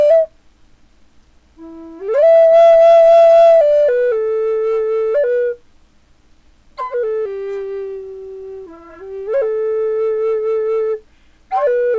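Nothing is technically wrong with this audio.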